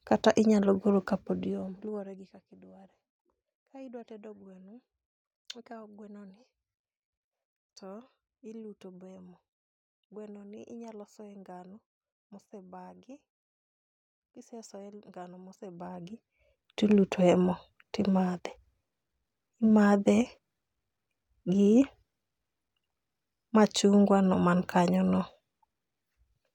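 No technical faults can be heard in this speech.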